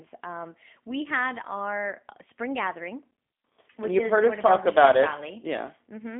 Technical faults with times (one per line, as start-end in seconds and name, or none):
0.00-6.20 G.729 codec